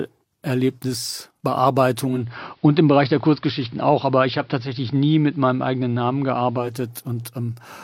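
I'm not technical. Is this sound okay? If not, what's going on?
No. Digital radio blending to analogue happens from 2.05 to 6.77 s. The radio lost its digital signal and faded over a quarter second to the AM broadcast. Faint hiss appears, and the volume shifts until it switches back.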